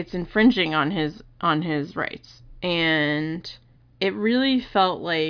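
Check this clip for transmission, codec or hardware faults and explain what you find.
I found no faults to report in this speech clip.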